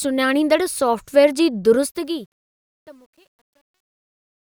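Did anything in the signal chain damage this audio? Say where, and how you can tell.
Yes. Truncation distortion on the fade appears at the sample-format or gain stage from 1.79 s to the end at 4.47 s. The speech fades out from 1.79 s, but its tail turns gritty, worst from 2.5 s onward. Without dither, the quiet samples collapse into coarse steps, which fits a 10-bit path.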